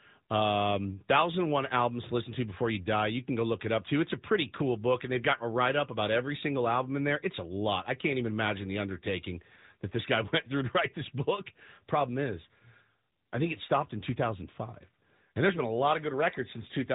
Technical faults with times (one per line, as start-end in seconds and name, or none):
0.00-16.95 AMR narrowband mobile codec